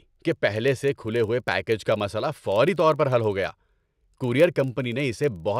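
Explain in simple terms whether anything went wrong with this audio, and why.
Something went wrong throughout. A filter restarted on every block, forgetting its state each time. That adds small ticks 25 times a second, heard as a buzz that grows louder with the speech.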